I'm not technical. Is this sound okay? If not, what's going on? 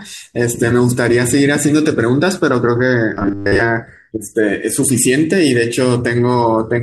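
No. From 3.14 to 3.61 s the speech turns into a flat, metallic buzz at 100 Hz. This is robotic sound from repeated short buffers. It is likely caused by the same 10 ms of audio being replayed over and over while most new sound goes missing.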